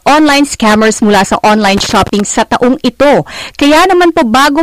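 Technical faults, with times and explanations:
Throughout: hard clipping. The speech is driven about 16 dB past what the signal path can carry, so every louder stretch hits the ceiling and is sliced flat, with roughly a fifth of the samples pinned at the limit. Those squared-off tops generate strong upper harmonics, heard as a harsh fuzz on every loud sound rather than occasional crackle. The waveform shows flat plateaus, and the spectrogram shows broadband energy smeared up to the top during voiced sounds.
1.77 to 2.20 s: loose connector crackle. Right after "scammers mula sa online" and ending just before "sa taong ito", a contact in the line makes and breaks rapidly, chopping the signal into fragments. It sounds like an irregular scratchy burst lasting under half a second. On the waveform the signal breaks into gaps and sharp spikes, while the spectrogram shows scattered vertical clicks spanning the full frequency range.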